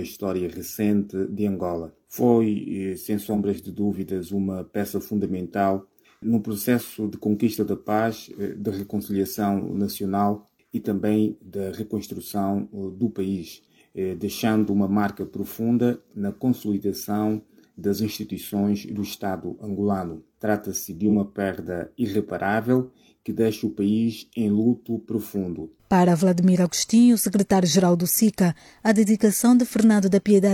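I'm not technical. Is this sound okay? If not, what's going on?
No, there are two brief glitches, at about 3.27 to 3.37 s and 21.09 to 21.16 s. Each is AAC frame loss with concealment: a tiny chunk, fitting one lost frame, went missing, and the player patched the gap with a guess, leaving a short smeared, noisy or phasey blip.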